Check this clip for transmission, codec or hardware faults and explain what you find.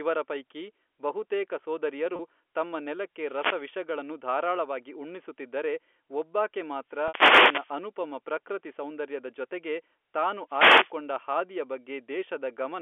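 Two kinds of fault turn up in this speech clip: a couple of brief packet-loss concealments, and three static bursts from a wireless microphone. All of it rides on ordinary G.711 telephone coding, so the whole thing sits in the narrow phone band, about 300 Hz to 3.4 kHz.

Packet loss with pitch repetition happens twice. The first is at 2.16 s and lasts 30 ms, which fits a single lost packet. The second is at 7.08 s and runs 60 ms, which sounds like two packets in a row. Each time, the receiver papers over the hole by replaying the last pitch cycle it got, fading it out over about 50 ms. In the first, you hear the voice briefly hang on one slightly buzzy tone before normal speech picks up again. The second is long enough that the repeat fades into silence before speech returns with a short cross-fade. The second dropout lands in the middle of a static burst.

The wireless microphone noise hits come at 3.16 to 3.78 s, right before "ಧಾರಾಳವಾಗಿ ಉಣ್ಣಿಸುತ್ತಿದ್ದರೆ ಒಬ್ಬಾಕೆ". 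The next runs from 6.85 to 7.83 s, between that phrase and "ಪ್ರಕೃತಿ ಸೌಂದರ್ಯದ ಜತೆಗೆ ತಾನು". The last is at 10.47 to 10.93 s, just after it. In each case the FM radio link dips because reflections cancel each other out. The receiver's own noise then rises, and you hear a quick swish of static.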